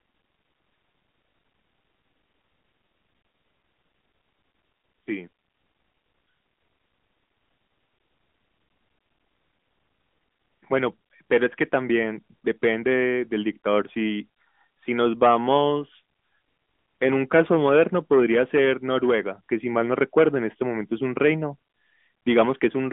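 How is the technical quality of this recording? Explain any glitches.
No glitches to report here: the speech comes through a narrowband mobile line, so the sound sits within roughly 200 Hz to 3.5 kHz, and there's nothing that breaks, drops out or jumps along the way.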